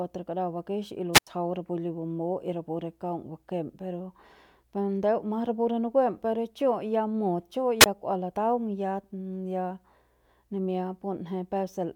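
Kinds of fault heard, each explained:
Wireless microphone squelch dropout: the radio link from the analogue FM microphone faded until the receiver's squelch shut its output, so the speech is briefly swallowed twice, each time with a short rise of hiss before the sound cuts out. Between 1.13 and 1.27 s the muted gap lasts about 87 ms. From 7.80 to 7.86 s it lasts only about 19 ms.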